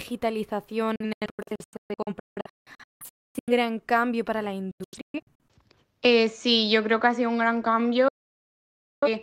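Digital broadcast dropout hits at 0.96 to 3.52 s, 4.71 to 5.40 s and 8.08 to 9.08 s. The receiver mutes on failed frames with 3 ms fades. The first run, ending before "cambio para la", scatters 1.5 s of holes, up to 256 ms each. After "cambio para la" come shorter gaps, up to 128 ms, and after "ha sido un gran" about 0.94 s vanishes.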